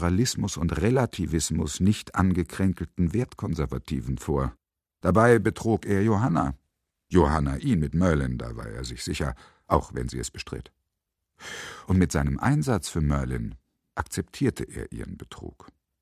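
No technical faults can be heard anywhere in this audio. Nothing in the sound calls for comment at any point.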